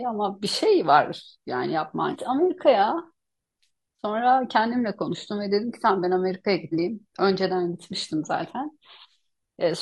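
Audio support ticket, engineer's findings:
Damaged data in a compressed stream. Short glitches in the speech at 2.09–2.16 s and 6.69–6.74 s. Probable component: decoder input. Corrupt frames misread, decoder loses sync and hunts for the next valid frame header.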